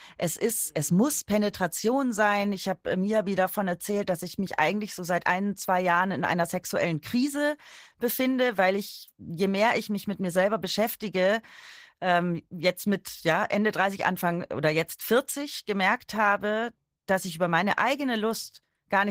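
Opus voice compression runs throughout: hybrid coding that fits roughly 16 kbps leaves the speech hoarse and slightly robotic, with smeared, blocky high-band texture above 8 kHz on a spectrogram.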